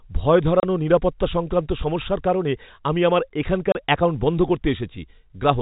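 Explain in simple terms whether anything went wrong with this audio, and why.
Packet loss filled with silence shows up twice, at 0.60 to 0.63 s and again at 3.72 to 3.75 s. Each time the speech drops out for 30 ms, which fits a single lost packet. The receiver played silence in the gap, leaving hard edges.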